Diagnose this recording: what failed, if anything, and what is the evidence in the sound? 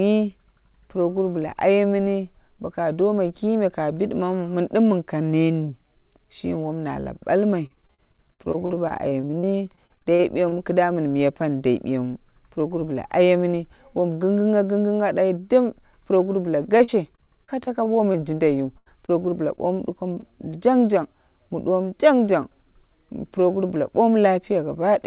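The network stage failed, with packets lost or arriving late on the way to the receiver's jitter buffer. The audio is narrowband, with nothing above 4 kHz, which fits a G.711 A-law call path at 64 kbps.

Repeated packet loss (robotic sound) occurs in three stretches: 7.66 to 10.54 s, just after "wom na lau balmai"; 16.66 to 18.16 s, just after "puroguru bla"; and 19.56 to 20.24 s. The first stretch has dozens of short holes, the longest about 51 ms, with roughly a fifth of the span concealed and about 0.5 s of real audio missing. The second has several holes up to 40 ms, and the third has a few of about 20 ms. Each hole is filled by extending the last sound, and the next hole follows before the audio settles. The result is a choppy texture with pieces missing.

A burst of packet loss at 18.78 to 18.88 s removes about 80 ms in one run. The receiver stretches the preceding sound across the gap while turning it down, so it decays into a held buzz or hiss. 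The audio then picks up further along, with that portion gone.

Short concealed packet loss at 19.06 s drops about 20 ms. The concealment continues the prior sound briefly and blends back into the real signal. This leaves a small smear or wobble rather than an audible gap.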